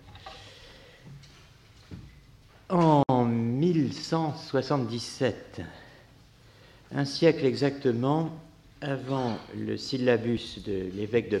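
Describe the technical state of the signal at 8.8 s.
At 8.8 s the signal falls within a run of periodic USB or driver dropouts lasting from 8.38 s to 10.37 s. At a fixed interval of 0.996 s, something stalls the audio path, and a few milliseconds of audio are skipped outright rather than filled with silence. The waveform jumps across each gap, so there are about three brief, evenly spaced ticks, audible only where signal is present.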